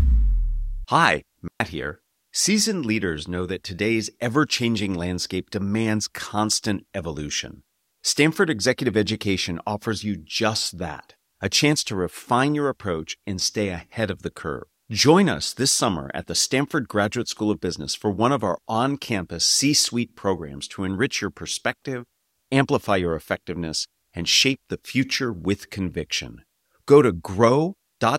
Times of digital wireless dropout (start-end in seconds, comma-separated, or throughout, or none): 1.48-1.60